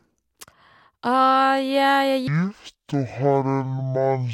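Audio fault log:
2.28–4.34 s, stereo read as mono: interleaved channels read as one halve the speed, dropping speech an octave; the spectrogram shows lowered harmonics and a faint mirror image up top.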